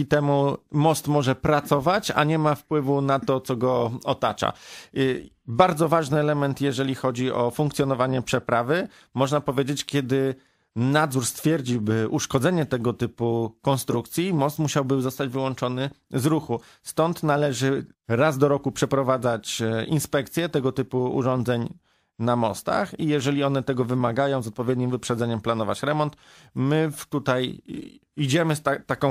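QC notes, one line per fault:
13.92–13.97 s, corrupt frame decoded: a single compressed frame arrived with flipped bits and the decoder played it anyway, so misread codes and gains put energy at the wrong frequencies, giving a short burst of wrong-frequency energy peaking around -10 dBFS.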